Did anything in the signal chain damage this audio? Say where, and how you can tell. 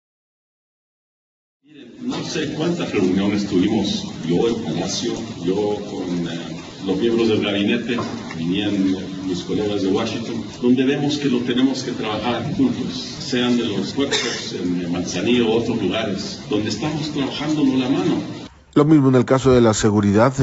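No, nothing in the signal chain damaged this audio.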